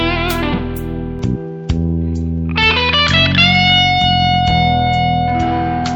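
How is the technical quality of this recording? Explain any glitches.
The recording's quality drops partway through. From 1.19 s to the end, the sound turns duller, with nothing above 7.6 kHz and a faint new background noise roughly 45 dB down. The likely cause is an input switched to a poorer device. The level barely shifts and there is no gap at the switch, but the different noise floor marks a new device rather than a codec or filter change.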